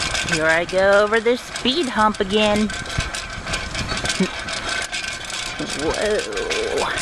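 No technical faults are audible.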